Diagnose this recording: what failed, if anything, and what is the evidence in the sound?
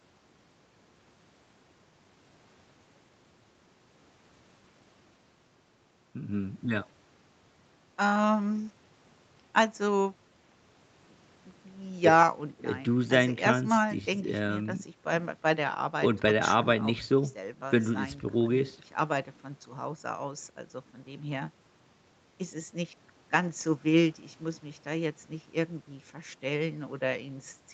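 Nothing failed; no faults present.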